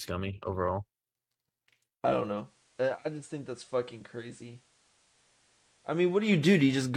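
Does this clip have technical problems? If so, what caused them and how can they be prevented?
Yes. Right after "i don't", from 2.38 to 6.31 s, the radio lost digital and cross-faded over 142 ms to the FM broadcast, a case of digital radio blending to analogue: level drops about 8 dB, and faint hiss. Better digital reception, or recording from a digital-only source, would prevent it.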